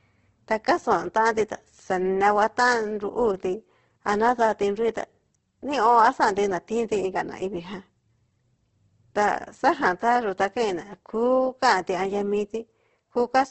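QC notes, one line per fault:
Throughout, Opus compression: rough, grainy speech with nothing above 8.4 kHz, likely a low-rate Opus encode near 12 kbps; spectrogram shows a hard ceiling and noise-filled bands.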